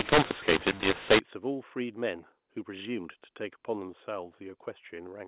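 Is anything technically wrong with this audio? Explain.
Yes. From 0.0 to 1.2 s there is a mu-law and A-law mix-up. The speech was encoded with G.711 A-law but decoded as if it were mu-law. The two laws map 8-bit codes onto different logarithmic level curves, so each sample comes back at the wrong amplitude: some too loud, some too quiet, and near-silent samples pushed well up. The speech sounds harsh and distorted, and the gaps fill with noise. After 1.2 s the A-law telephone coding decodes correctly, with the expected band limit at 4 kHz.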